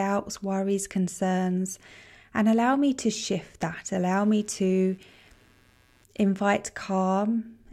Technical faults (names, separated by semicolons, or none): computer activity noise